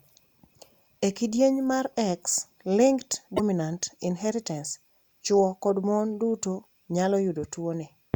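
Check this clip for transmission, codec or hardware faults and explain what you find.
One codec fault is present. Damaged data in a compressed stream at 3.33–3.40 s: corrupted bytes make the decoder misread frames and lose sync, producing a brief disruption in the speech.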